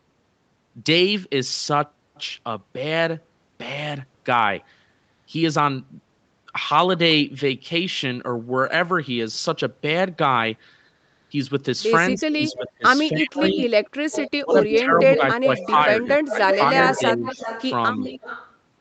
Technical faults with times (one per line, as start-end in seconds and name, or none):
12.15-12.68 echo leak
12.16-13.57 speech suppressed in double talk
13.47-14.81 echo leak
14.37-17.41 speech suppressed in double talk
15.15-15.83 echo leak
16.26-17.69 echo leak
18.01-18.57 echo leak